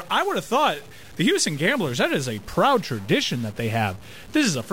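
Harsh, buzzy distortion rides on the speech from start to finish, and the pauses between phrases are not silent but filled with a gritty noise floor. The pattern points to a stuck bit, likely a single data bit held at 0 or 1 by a faulty line or converter. Roughly half the samples are pushed off by that bit's weight, a step of about -40 dBFS. Because small values near zero also catch the bit as their sign changes, even the quiet gaps turn into noise.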